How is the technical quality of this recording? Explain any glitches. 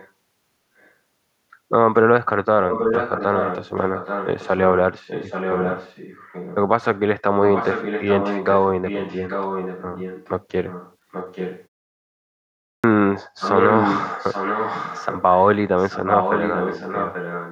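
The recording has two clear problems: a recurring echo of the speech and one word onset that is cut off.

Echo leak is heard at 0.78–0.91, 2.7–4.6, 5.07–6.56, 7.2–10.29, 10.67–11.67, 13.39–15.22 and 15.78–17.51 s. A second copy of the speech trails the original by about 0.83 s. It is barely audible in the first instance and fairly loud in the rest, close to the direct sound in several. The likely cause is a loudspeaker at the far end whose echo canceller let the played-back sound return. On a spectrogram, each voiced pattern reappears as a fainter duplicate shifted about 0.83 s to the right.

A clipped start after a pause occurs at 12.56 s. After about a second of silence, the first 276 ms or so of sound is missing, so the speech begins abruptly without its onset. The output device appears to power down during the gap and wake too slowly. In the waveform, the envelope jumps from flat silence straight to full amplitude with no rise.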